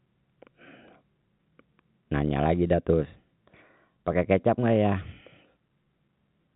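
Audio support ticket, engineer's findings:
No faults found in speech.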